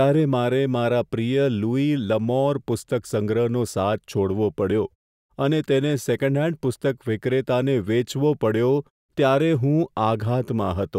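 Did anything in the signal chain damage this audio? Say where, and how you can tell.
No, nothing in the chain damaged this speech: the signal shows no dropouts, distortion or timing disruption, and the background falling silent in the pauses is just the output muting between phrases and coming back in time for each one, with only very quiet sound lost.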